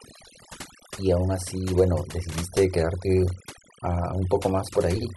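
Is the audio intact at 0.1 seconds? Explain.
No, not really. At 0.1 seconds the speech is already under the overdone noise removal that runs through the whole clip. The noise reducer was pushed too hard, so any frequency band sitting near its noise estimate gets pulled way down or shut off, and the softer parts of the voice go with it. You hear the background drop and break up into little twinkling, warbling specks.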